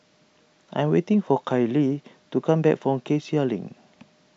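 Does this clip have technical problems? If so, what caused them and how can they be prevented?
No, nothing in this speech recording points to a technical problem, so there's nothing here that needs fixing or preventing.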